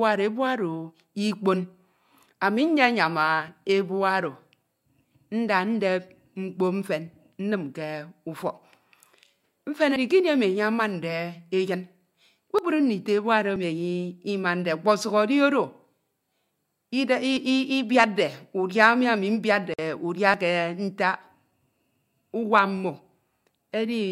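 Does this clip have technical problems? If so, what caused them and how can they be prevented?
Yes. At 3.48, 9.96, 12.59, 13.56, 17.37 and 20.34 s the speech lurches forward with no pause, as if a small slice were cut out and the edges butted together. The missing pieces run from roughly 20 ms up to about 70 ms, the longest at 9.96 s. This is likely a dropped buffer (overrun): the recording program failed to collect incoming samples before the hardware overwrote them. Larger buffers, a higher-priority audio thread and less competing load on the machine would prevent it.

At 19.74 to 19.79 s the sound breaks into a brief gap of about 48 ms with softened edges, then carries on exactly where it stopped. This is a gap at a join of encoded pieces. Two separately encoded segments were joined without trimming, so the encoder's start-up delay and the padding of the last frame remain as dead air between them. 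Encoding the whole recording in one pass, or joining with a gapless-aware tool that removes the delay and padding, would prevent it.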